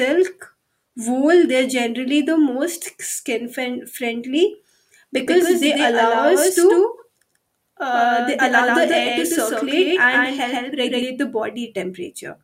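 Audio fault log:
5.27 to 11.03 s, doubled audio track: the speech is joined by a second copy about as loud as the first, trailing by roughly 150 ms, with no decay or room colour and an abrupt start and stop, likely from the same signal being captured again through a slower path.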